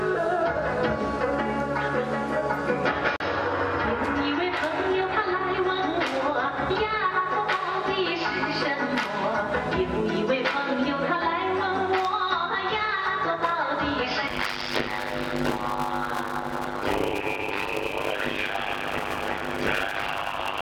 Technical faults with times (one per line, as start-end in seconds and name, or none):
14.27-20.61 block size mismatch (padded)